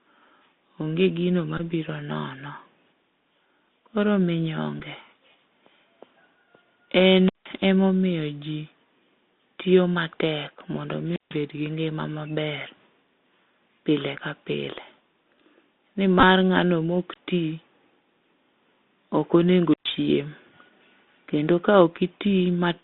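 Speech over a band-limited link, roughly 200 Hz to 3.7 kHz, with the granular hiss and scratchy s sounds of the Bluetooth CVSD headset codec, which fits a 64 kbps CVSD link. Bluetooth headset packet repeats turn up as a short buzzy stutter at 1.58–1.61 s, single ticks at 4.80 s and 14.17 s, and a scattered buzz at 16.20–16.23 s just before "ng'ano ma ok". That's the headset re-decoding the last good packet while the link drops out. On top of that there are three wireless microphone squelch dropouts. At 7.23–7.50 s, right before "ema omiyo ji", you get a rise of hiss and then about 170 ms of near silence. At 11.02–11.43 s, after "tiyo matek mondo", the mute runs about 150 ms. At 19.70–19.87 s it's about 120 ms. Each time the receiver mutes because the FM signal faded.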